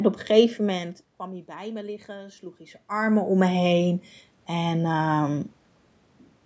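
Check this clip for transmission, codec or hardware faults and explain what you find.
One fault stands out, an automatic gain rising event. From 0.64 s to 3.35 s the speech and the room noise behind it swell together, slowly climbing by about 4 dB over nearly three seconds. The level at the microphone had fallen by about 20 dB as the talker moved away around half a second in. The automatic gain control read the input as too quiet and raised its gain step by step, lifting the background along with the voice.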